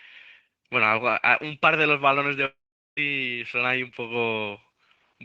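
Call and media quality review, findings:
Long network dropout, 2.45 to 2.99 s in the speech. Last sound smeared into a fading buzz, then about 0.42 s of silence. Around 0.52 s of audio missing. Likely cause: sustained packet loss on the network path, jitter-buffer concealment exhausted. Unlike a short packet-loss glitch, concealment runs out and goes silent. Unlike a buffer underrun, speech resumes further on with the lost stretch skipped, not delayed.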